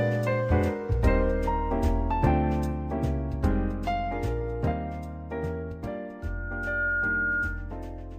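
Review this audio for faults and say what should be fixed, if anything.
Loudspeaker feedback squeal, 6.22 to 7.76 s: the mic re-amplifies its own speaker, so a 1.4 kHz tone swells within a second to match the sound. Move the mic back or notch 1.4 kHz.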